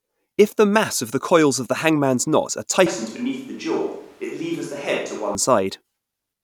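It's a speech clip, and right after "the hangman's knot are" at 2.86 s the sound suddenly goes roomy and hollow, loses its low end, and drops about 5 dB, with background noise coming up to around 30 dB below the speech. It snaps back at 5.35 s. That's most likely a switch to a distant microphone, with the close mic dropping out and something further off, like a camera mic, covering that stretch.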